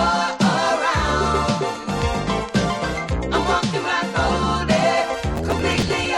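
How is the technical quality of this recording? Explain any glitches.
The recording has one clear fault near the end. From 5.36 to 6.06 s there is processor overload crackle: the processor falls behind on its audio buffers, each only a few milliseconds long, and misses a few dozen deadlines in a row. Each miss replays a scrap of old audio with hard edges, so the sound turns gritty and tearing. Unlike a single dropout or click, it is a dense, irregular burst that rides on the sound and stops when the load clears.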